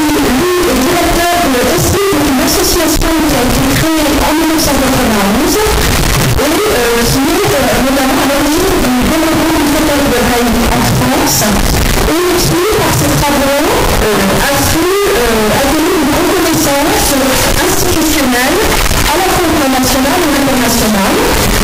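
The 16-bit samples have likely been read with signed and unsigned mixed up, flipping the top bit so that every zero crossing turns into a jump across the full range. Across the whole clip the audio is extremely loud, harsh distortion, and quiet passages come out as loud as everything else.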